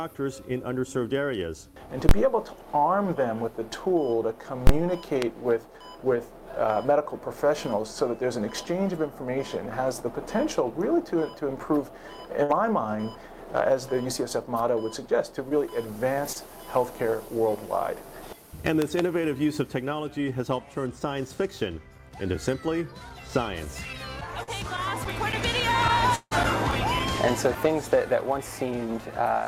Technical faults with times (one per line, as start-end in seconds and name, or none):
2.09-2.11 invalid numbers at full scale
4.67-4.69 invalid numbers at full scale
5.22-5.24 loud pop
12.43-12.51 burst of packet loss
15.49-15.53 short concealed packet loss
16.33-16.37 short concealed packet loss
18.82-19.01 loud pop
24.43-24.49 short concealed packet loss
26.15-26.33 long network dropout